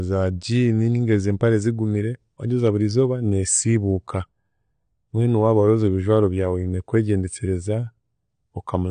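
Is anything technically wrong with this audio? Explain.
Yes. All the way through this speech there's nothing above about 9.8 kHz, and the sound is dull and plainly smeared, with a fizzy, warbly edge on sibilants and held vowels. That's most likely AAC compression, probably AAC-LC, squeezed hard enough that the encoder dropped the top band and coarsely quantised what's left. The swirly texture comes from bands being thinned out or patched with noise, which fits a low bitrate, roughly 32 kbps.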